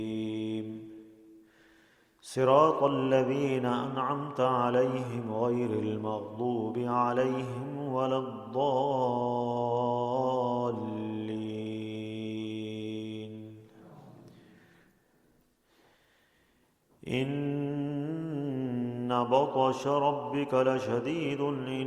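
No technical faults can be heard anywhere in this audio.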